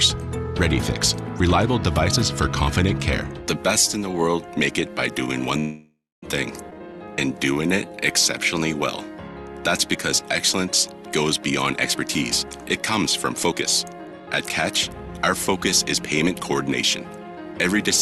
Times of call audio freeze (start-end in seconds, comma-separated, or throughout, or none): 5.59-6.25